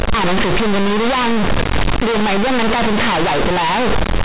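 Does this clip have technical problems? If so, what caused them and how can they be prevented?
Yes. The whole clip suffers from companded audio read as linear. The sound was stored as mu-law G.711 bytes, which compress level on a logarithmic scale, but it's being played back as plain 8-bit linear samples with no expansion step. Every time the waveform changes sign, the output jumps across roughly half its range, so quiet passages come out as big as loud ones and the shape gets badly bent. You hear loud, buzzy distortion, and the pauses fill with heavy noise. The telephone band limit, nothing above 4 kHz at 8,000 samples a second, is just the G.711 format itself. To prevent it, make sure the file header or player format is set to mu-law so the decoder expands the bytes before playback.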